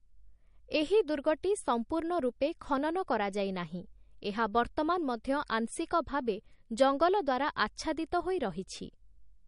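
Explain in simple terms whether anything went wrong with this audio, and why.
Yes. The speech was most likely squeezed into a small, low-quality MP3 at some point and then saved again as a large, high-quality MP3. That is low-bitrate audio saved at a high bitrate. The bigger file cannot bring back what the first save threw away, so the damage stays for the whole recording. You can hear it as a missing top end: nothing at all remains above about 10.6 kHz, so crisp sounds like s and t lose their sparkle.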